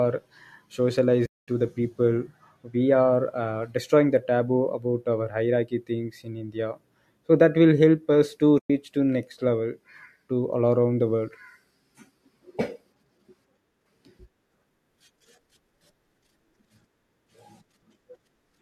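Speech, with two dropouts. From 1.26 to 1.48 s and from 8.59 to 8.70 s, the sound fades to silence and back. The edges are soft. This is AAC frame loss with muting. The decoder zeroes the lost frames, and overlapping windows smooth each gap. The gap lengths fit short frames of about 10 ms.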